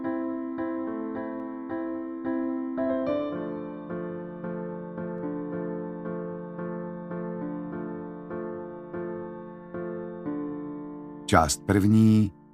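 Two sharp, isolated clicks stand out in the audio, one at 1.4 s and one at 5.18 s, and their likely cause is dropped samples: just a handful of samples, well under a millisecond, go missing from the stream, so the waveform steps abruptly from one value to a later one. Nothing audible is lost. On a waveform each shows as a small discontinuity, and on a spectrogram as a thin vertical line spanning the frequency range.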